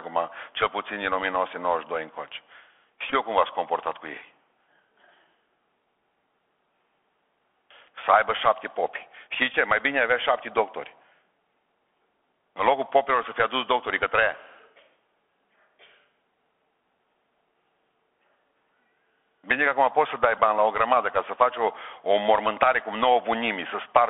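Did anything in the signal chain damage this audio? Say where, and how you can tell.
Yes. At the codec stage, Bluetooth CVSD headset coding runs throughout. Audio stops near 3.4 kHz, sibilants turn scratchy, and granular hiss reflects its one-bit adaptive-step tracking.

On the radio link, Bluetooth headset packet repeats cause brief buzzy ticks at 3.10–3.13, 9.53, 13.23 (after "locul popilor") and 20.38 s (after "acum poți să dai"). Each lasts 7.5 to 15 ms, which points to a few lost packets replayed.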